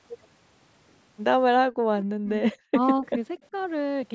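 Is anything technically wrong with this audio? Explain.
Yes. Speech suppressed in double talk appears from 1.58 to 2.42 s, at 2.70 to 2.79 s, and at 3.51 to 3.56 s. The speech dips or cuts out, most deeply about 40 dB, but only about 10 dB in the last event. This is likely the echo canceller ducking the talker while the far side spoke. On a waveform it shows as sudden envelope holes, and on a spectrogram as vertical gaps.

An echo leak at 3.42 to 3.47 s leaves a faint copy, delayed 243 ms and about 40 dB below the speech. It is likely residual loudspeaker echo. On a spectrogram it appears as a dim, shifted repeat of earlier harmonics.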